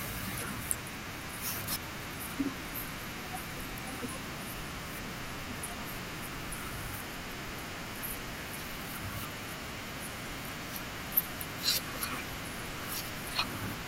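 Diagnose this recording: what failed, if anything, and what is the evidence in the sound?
At the codec stage, a single compressed frame arrived with flipped bits and the decoder played it instead of concealing it. Misread gains and codes put energy at frequencies that don't belong to the speech, so from 2.67 to 2.70 s there is a brief blip, an out-of-place burst lasting about one frame's length. The spurious energy peaks at around -30 dBFS, foreign to the speech. This is a corrupt frame decoded, not a dropout.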